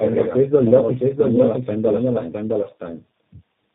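Right from the start there's a doubled audio track: a second full-band copy of the speech trails roughly 0.7 s behind, about 5 dB quieter, with no room colour or decay on it. It's likely a slower capture path mixing the same audio back in, so everything sounds echoed.

Running through the whole clip too is tandem speech coding. The speech went through three speech codecs in a row, each recoding the previous one's damage, which fits a chain ending in G.729A. Nothing survives above 3.5 kHz, and it sounds rough, muffled and warbly.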